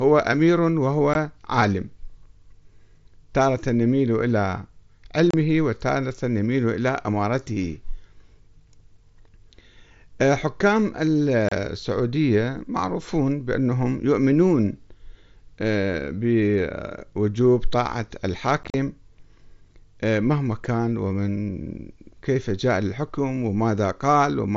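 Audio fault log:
1.14 s, 5.31–5.34 s, 11.49–11.52 s, 18.63–18.74 s: unconcealed Bluetooth headset packet loss. Headset speech packets vanished unreplaced, leaving 15, 30 and 30 ms holes, then 67.5 ms lost across 105 ms, heard as chopping. Waveform shows flat gaps with sheer edges; spectrogram shows blank vertical stripes.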